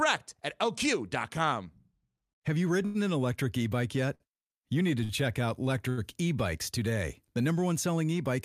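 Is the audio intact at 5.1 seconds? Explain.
No. From 5.04 to 5.11 s there is a short stall from a late packet. The jitter buffer ran empty, so the receiver stretched the last sound by about 55 ms until the packet arrived. Nothing is lost, but that sound is held too long, with a faint buzz or dip, and everything after it runs 55 ms late.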